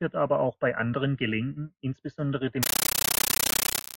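From 2.63 s to 3.97 s, an AC-3 bitstream, consistent with 640 kbps, is passed on undecoded and treated as ordinary samples: a compressed stream played as audio. The speech gives way to very loud chattering static, 13.3 ms noise bursts between silent gaps, 31.25 times a second.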